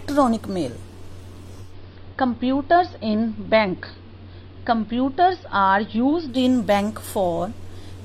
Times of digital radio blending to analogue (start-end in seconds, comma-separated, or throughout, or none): 1.59-6.45